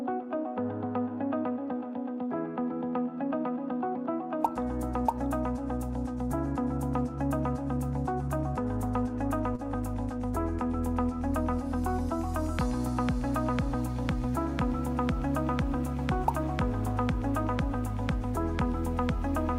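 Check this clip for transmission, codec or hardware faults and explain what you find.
One transmission fault is present: a short stall from a late packet, from 9.55 to 9.62 s. A packet arrived after its playout time, so the jitter buffer ran dry. The receiver filled the gap by extending the last sound for about 33 ms, then resumed exactly where it left off. Nothing is lost, but playback now runs 33 ms later. You hear a brief hold on the sound, with a faint buzz or dip.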